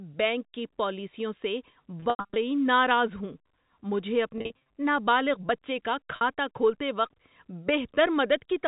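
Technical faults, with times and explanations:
2.0–2.36 s, 4.38–4.60 s and 6.16–6.21 s, packet loss with pitch repetition: the receiver loops the last pitch period over scattered gaps, after "بینک کی پالیسیوں سے" and around "نابالغ بچے کا", so the sound turns briefly held and buzzy.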